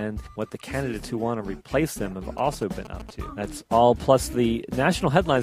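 A nearby 2G phone transmitting in short groups of radio pulses, the signalling pattern before a call or message arrives, gets picked up and rectified by the audio circuitry from 2.38 to 3.11 s. This is GSM signalling bursts interference. It lays a galloping dit-dit-dit run of short buzzes over the sound, pulsing at about 217 Hz and sitting roughly 15 dB below the main signal.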